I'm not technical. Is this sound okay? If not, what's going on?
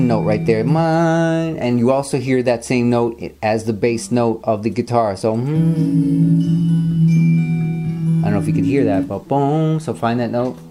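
Yes, it's fine; there's nothing wrong to hear in this one, so you can relax about it.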